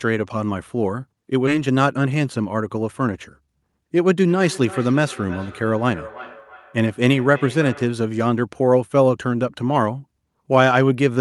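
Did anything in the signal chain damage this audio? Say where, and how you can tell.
Yes. The first damage is a skip ahead at the network and jitter-buffer stage, at 1.47 s. The speech jumps forward with no gap and no fill. Roughly 0.4 s of speech is gone, and the two sides of the cut are butted together. That points to a run of audio lost in transit or discarded when the buffer overflowed, while later packets were already queued. Playback simply resumed from the newest audio it held.

Right after that comes a jitter buffer speed-up, from 1.57 s to 3.82 s. The speech runs at about 109% of its normal rate, but the pitch stays put. It sounds hurried. The buffer was holding more audio than its target, so the receiver trimmed out many short pitch-period slices in a row. In total it removed about a fifth of a second. That is how it drained the excess delay.

The third fault is a feedback echo between two devices, at the call-processing stage. 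It runs from 4.26 s to 8.11 s. The speech returns at a steady interval of roughly 0.3 s. It sounds thinner and more ringing, and it peaks at about 18 dB below the direct speech. A second device in the same room is replaying the call, and this microphone is picking it up again. The local echo canceller only knows its own loudspeaker signal, so it cannot remove that returning copy.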